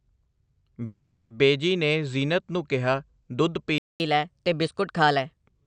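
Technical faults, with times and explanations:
0.85–1.33 s, call audio freeze: the speech smears into a fading buzzy hiss for about 0.45 s, then picks up exactly where it left off with nothing lost. Packets were likely held up in transit, so the jitter buffer ran dry and the receiver stretched the last sound.
3.78–4.00 s, playback stall: the speech cuts out mid-flow into silence for about 0.22 s before continuing from the same point. The player likely ran out of data or had its output thread blocked until it recovered.
4.00–5.45 s, catch-up at higher speed: right after the stall, the speech runs 1.15 times fast and sounds roughly two semitones higher, then settles back to normal speed and pitch. The player is resampling its backlog faster to win back the time lost in the stall.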